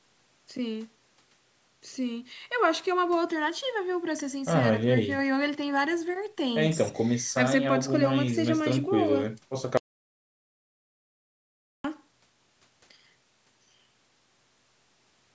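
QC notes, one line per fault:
9.77–11.84 s, audio dropout to silence: the speech cuts off abruptly mid-flow and returns just as abruptly, leaving about 2.07 s of silence in which whatever was said is lost. The likely cause is a brief loss of the input feed while the recorder kept writing silence. Unlike a natural pause or a noise gate closing, the room tone and the band-limited call-microphone background, which stops at 8 kHz, both vanish completely, with no fade at either edge.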